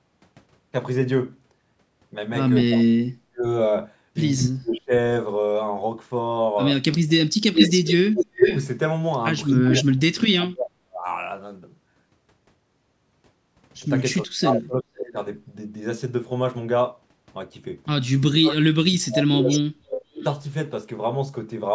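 From 2.67 to 4.92 s the speech keeps dropping away in pieces, at its deepest by roughly 40 dB, so that about a second of it is lost in total. This is speech suppressed in double talk. The likely cause is the call's echo canceller meeting both sides talking at once and, unable to tell its own talker from the loudspeaker echo, turning everything down.

At 7.08 s a delayed copy of the speech appears, trailing it by 374 ms and sitting roughly 5 dB above the speech. It lasts until 9.84 s. This echo leak is likely a loudspeaker whose canceller let part of the pickup through and sent it back. Overlapping it, from 7.18 to 11.06 s, the speech is again chopped and pushed down, around two seconds of it in all, likely the same double-talk suppression.

Between 14.2 and 15.16 s the speech dips out once more for about a second, likely double-talk suppression again. Inside that stretch, at 15.03 to 15.12 s, a faint scrap of echo leaks through 498 ms behind, well below the speech and likely from the same imperfect canceller.

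From 18.42 to 20.24 s the 498 ms echo returns for longer, around 10 dB under the speech, likely leaked from the loudspeaker side. From 18.74 to 20.24 s the speech is cut into pieces for about a second and a half, likely suppressed in double talk. Throughout, the call microphone processing limits the band to 8 kHz.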